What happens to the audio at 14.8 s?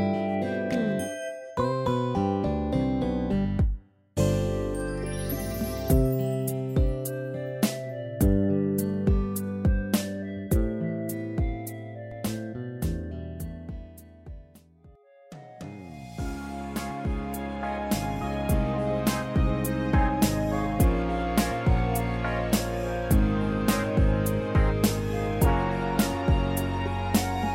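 At 14.8 s you're near the tail end of a doubled audio track that runs from about 12.11 to 14.95 s. A second copy trails the original by roughly half a second, around 10 dB down, dry and full-band, then drops out abruptly. It's likely a slower parallel capture path mixing the same audio back in.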